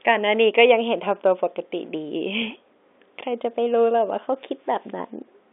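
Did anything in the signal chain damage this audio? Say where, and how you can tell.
No, nothing in the chain damaged this speech: the band is limited to roughly 250 Hz to 3.6 kHz, as expected from a G.711 telephone line, and any coding noise under the speech is faint at most.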